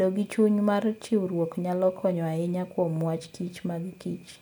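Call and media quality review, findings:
No faults found on listening.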